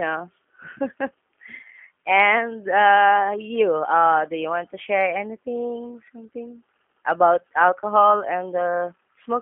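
From start to finish the speech carries plainly audible G.729 codec damage, consistent with the G.729A variant at 8 kbit/s. The encoder models each 10 ms frame as a vocal-tract filter plus a pitch predictor and a few sparse pulses, so voices come out rough, buzzy and faintly synthetic. On a spectrogram the energy sits between about 150 Hz and 3.4 kHz with nothing above, and harmonics look smeared and blocky frame to frame.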